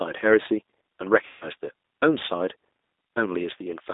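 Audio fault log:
Throughout, G.729 codec: the sound is intelligible but rough and slightly synthetic, plainly damaged, with a narrow telephone band running from roughly 300 Hz to 3.7 kHz and no brightness above it. This points to G.729A at 8 kbit/s, which does not send the waveform itself. It sends a vocal tract filter, a pitch predictor and a few pulses for each short frame, and the decoder rebuilds an approximation from those.
1.27 to 1.47 s, VoIP packet loss concealed by the speech codec: the speech gives way to a stretched continuation that fades, and it stays weak and distorted for a short while after the sound returns. About 140 ms of audio went missing, which fits seven lost packets. The decoder filled the gap by repeating its last pitch and filter settings at a falling gain. Because each frame is built on the one before, recovery lags behind the return of the packets.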